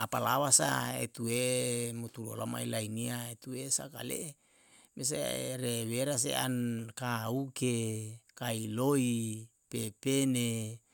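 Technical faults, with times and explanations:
No technical faults are audible anywhere in the speech.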